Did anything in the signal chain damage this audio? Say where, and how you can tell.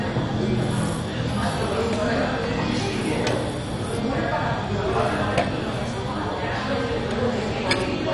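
Yes. The whole clip sounds dull and gurgly, with upper bands switched off, which points to MP2 compression at the codec stage, likely at a low rate around 48 kbps.

Single sharp clicks at 1.81 s and 7.12 s are dropped samples, likely a driver or buffer losing only a handful of samples and making the waveform jump.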